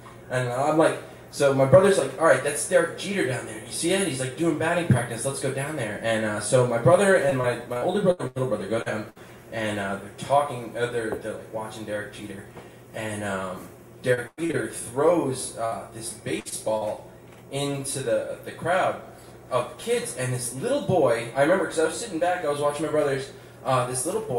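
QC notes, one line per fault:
7.29–8.38 s and 14.14–14.55 s, repeated packet loss (robotic sound): the audio turns choppy, with pieces dropping out in quick succession. In the first stretch six gaps remove about 260 ms, the longest 85 ms, so about a quarter of the span is patched. In the second, four gaps remove 200 ms, the longest about 100 ms, covering nearly half. Each hole is filled by stretching the last sound, and the next loss arrives before it settles.
8.82–8.88 s, 16.49–16.54 s and 16.78–16.83 s, short concealed packet loss: each is a brief smear or wobble, with a short sound possibly vanishing. About 40, 20 and 40 ms of audio never arrived in time. The decoder bridged each hole by continuing the preceding sound, pitched where it was voiced and as noise where it wasn't, then cross-faded back into the real signal.
9.10–9.18 s, 15.65–15.74 s and 16.40–16.47 s, burst of packet loss: each is a short held buzz or fading hiss, after which the sound picks up further along with a piece missing. 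In each burst about 60 ms of consecutive packets was lost or came too late. The receiver extended the last sound while turning it down over the gap, so the real audio from that stretch never plays.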